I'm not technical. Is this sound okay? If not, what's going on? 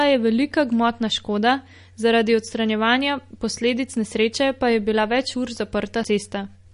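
No. The recording was likely squeezed hard by MP3 compression, which saves space by throwing away detail the encoder judges unimportant. Here it has cut off everything above about 10.6 kHz for the whole clip, so the speech sounds dull and lacks crispness. The damage is plainly audible: quiet details flicker in and out, giving a watery, swirly quality, and s sounds come out metallic or smeared.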